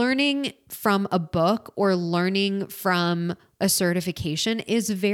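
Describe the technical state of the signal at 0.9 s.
At 0.9 s the speech signal is intact, with no dropout, distortion or other fault at that point.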